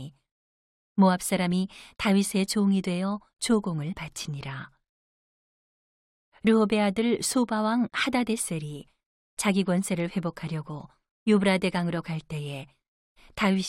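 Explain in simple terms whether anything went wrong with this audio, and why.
Nothing went wrong with this speech recording, as no technical fault can be heard anywhere in it. The audio stays steady and continuous throughout, with no problem at any point that needs explaining.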